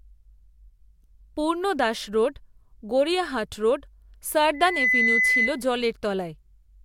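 From 4.54 s to 5.62 s a loudspeaker feedback squeal takes over the speech. A single 2 kHz tone swells over roughly a third of a second to about 5 dB above the voice. Unlike a fixed test tone or hum, it grows on its own because the mic-to-speaker loop gain exceeds one at that frequency.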